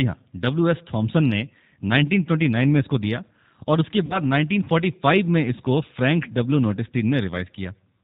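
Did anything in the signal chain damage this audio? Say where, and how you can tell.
Yes. The G.729 codec damages the whole clip at the codec stage. The speech is coded at 8 kbit/s, and the coding damage is plainly audible. Nothing above 4 kHz survives, so the speech sounds dull and boxed-in. The codec rebuilds each 10 ms frame from a vocal-tract filter, a pitch predictor and a handful of pulses, which leaves the speech slightly rough and synthetic.

VoIP packet loss concealed by the speech codec happens at the network stage, from 4.06 to 4.21 s. Around 40 ms of audio never arrived, which fits two 20 ms packets going missing. The decoder filled the gap by repeating its last pitch and filter settings at steadily lower gain, so the sound smears into a fading buzz or coloured noise. Each frame builds on the one before, so the speech stays weak or distorted until about 4.21 s.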